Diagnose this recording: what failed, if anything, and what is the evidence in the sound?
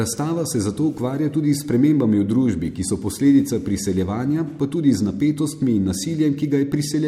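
Converter stage: clock slip clicks, ticks about every tenth of a second from 0.13 to 7.04 s, likely unsynchronised clocks dropping or repeating single samples.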